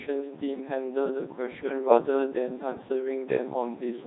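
From start to finish the speech passes through a Codec 2 vocoder, heavily damaged, with a sound that fits roughly 2.4 kbit/s. Only pitch, voicing, energy and a spectral envelope survive, and sine-wave resynthesis makes it robotic and buzzy. A spectrogram shows neat, smeared harmonic stripes, and the waveform looks unlike the original.

From 1.88 to 1.98 s, bit errors on digital voice radio corrupt what sounds like about two frames, at an error rate of a few percent. The voice briefly jumps in pitch and level into a warbling bleep, seen as an abrupt, mismatched block of harmonics.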